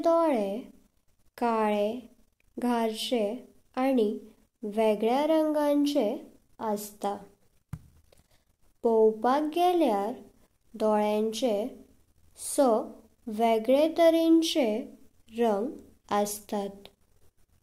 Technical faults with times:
none

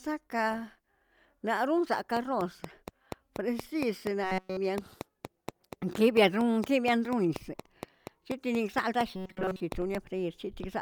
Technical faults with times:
2.17-9.96 train of clicks
4.24-4.57 robotic sound from repeated short buffers
9.16-9.60 robotic sound from repeated short buffers

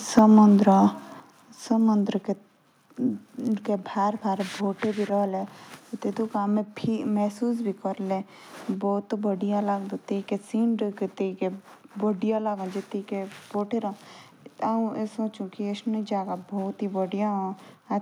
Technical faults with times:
0.18-0.39 microphone overload
0.19 microphone volume stepped down
1.20 microphone volume stepped down

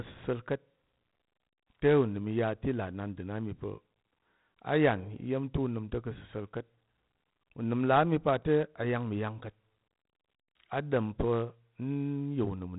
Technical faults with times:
0.00-12.79 4-bit ADPCM compression

